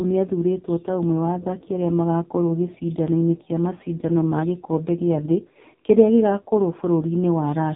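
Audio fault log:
throughout, AMR narrowband mobile codec: the speech is confined to a narrow telephone band with nothing above 3.8 kHz, and the voice has a heavy buzzy, synthetic quality. The codec rebuilds each 20 ms frame from a vocal-tract filter excited by only a few pulses per 5 ms subframe, so little of the natural waveform survives. Damage this heavy points to one of the low AMR-NB modes, consistent with about 5.9 kbps.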